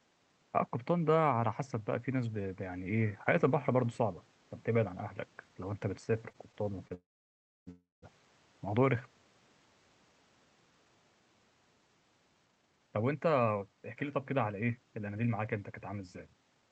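Speech that starts to catch and judder at 6.29 s, with four brief hitches up to 6.92 s where the last sound is held for a moment before the voice moves on. These are repeated stalls (stutter). Packets were reaching the receiver late or too slowly, so its jitter buffer kept running dry, and each time it stretched the previous sound to bridge the hole. About 70 ms was filled this way, the longest single gap around 29 ms, and nothing is lost, but the passage drags. Right after, at 6.94 s, the audio hangs: a short continuation of the last sound fades into roughly 0.63 s of silence before speech resumes at 7.69 s. It happens again from 7.71 to 8.04 s, about 0.32 s in total with around 0.17 s silent. Both are a call audio freeze, likely caused by packets held up in transit emptying the buffer, which then played an invented tail until the audio carried on from where it stopped, pushing everything later instead of dropping any of it. 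From 12.46 s to the end at 16.70 s the speech sounds hurried while keeping its pitch, running at about 117% speed. This is a jitter buffer speed-up. The receiver held more audio than it wanted, so it cut many tiny pitch-period slices, roughly 0.7 s altogether, to catch up. Through all of it the Opus call path limits the sound to about 8 kHz.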